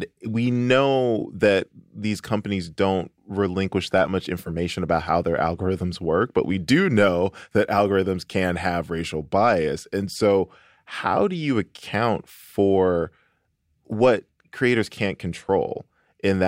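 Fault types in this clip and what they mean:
Nothing stood out on listening to this speech clip.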